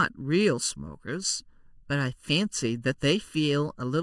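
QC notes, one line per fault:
Throughout, channel delay (comb filtering): one channel arrives a little under a millisecond behind the other, and when the two are folded to mono, the parts of the speech they share cancel at evenly spaced frequencies. The first notch sits around 700 Hz and further notches repeat roughly every 1.4 kHz above it, carving fixed gaps across the spectrum. That is why the speech sounds hollow and phasey for the whole clip.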